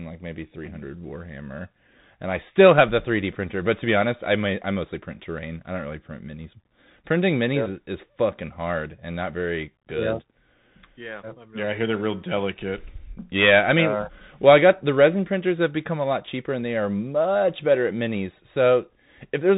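A speech clip carries the Bluetooth CVSD headset codec throughout. Nothing above 3.8 kHz passes. The one-bit adaptive coding fits a 64 kbps link. Its step size cannot track loud high sounds, so they distort. S sounds turn scratchy. A granular hiss sits underneath.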